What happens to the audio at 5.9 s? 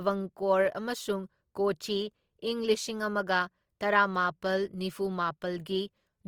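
At 5.9 s the speech sounds grainy and rough, with a noisy, hashy texture on tonal parts, as it does throughout. This is likely Opus compression in its music (CELT) mode at a rate that fits about 24 kbps, filling starved bands with noise while keeping full bandwidth up to about 20.2 kHz.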